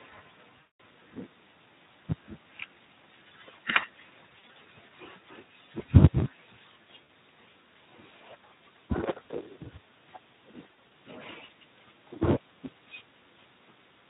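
A steady buzz at 109 Hz runs under the whole clip, and the speech moves about 1.09 times too fast while keeping close to its normal pitch. This is a block size mismatch (truncated): one stage writes longer blocks than the next reads, so each block's tail is dropped, clipping the audio into a rhythmic buzz and shortening it.

From 0.60 to 0.75 s, about 200 ms of audio is lost, and the speech is stretched into a buzzy tone or coloured noise that fades. Shorter versions follow: scattered dropouts from 4.40 to 4.56 s, with the longest gap 40 ms; a brief one at 7.06 s; and another scattered patch from 10.68 to 10.89 s, with gaps up to 60 ms. This is VoIP packet loss concealed by the speech codec. The Speex decoder, running lightly compressed at a moderate rate, fills each missing stretch by extrapolating the last sound and fading it out, and the speech sounds weak for a moment afterwards.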